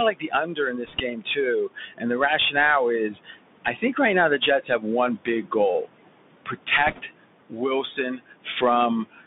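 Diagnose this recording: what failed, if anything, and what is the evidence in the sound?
Call processing: the noise suppressor lowers the room noise, sitting about 13 dB under the speech, by about 22 dB between phrases. The residue swells under the speech throughout.

Codec: a Bluetooth CVSD headset codec carries everything at 64 kbps, limiting the band to 150 Hz–3.6 kHz, with scratchy sibilants and granular hiss plainly audible.

Call processing again: speech was cut by the noise suppressor at 0.11–2.2, 3.08–3.99, 4.38–5.9, 7.5–8.62 and 9.04–9.25 s. It was mistaken for noise, so soft sounds drop by about 19–22 dB.

Network link: bit errors on the Bluetooth voice link, at roughly 1 to 1.5 percent, put a brief rushing crackle over the speech at 0.85–1.0 s and 6.87–7.01 s, without sharp clicks.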